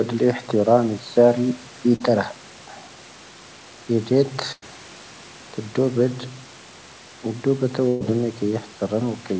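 At 1.96 to 2.02 s there is a short concealed packet loss. About 40 ms of audio never arrived in time, and the receiver filled the hole by extending the preceding sound before blending back into the real signal. It comes across as a quick smear or wobble. On a spectrogram the sound runs on unchanging across that 40 ms strip instead of moving naturally.

Two bursts of packet loss follow. From 4.52 to 4.64 s, about 100 ms is missing. The concealment continues the last sound and fades it, and the final 30 ms or so drops to silence before the audio resumes further on. From 7.88 to 8.02 s, about 120 ms is lost and bridged entirely by the fading continuation, with no silent gap. On a spectrogram each burst shows a frozen, weakening continuation ending in an abrupt jump. The waveform shows a decaying envelope, and in the first burst a flat line just before the audio picks up again. Throughout the clip, the normal band limit of the call path leaves nothing above 8 kHz, which fits a wideband codec such as G.722.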